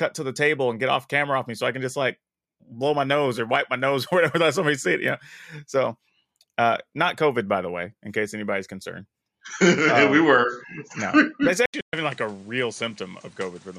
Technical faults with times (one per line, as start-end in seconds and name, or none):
11.66-13.78 input switched to a poorer device
11.81-11.93 playback stall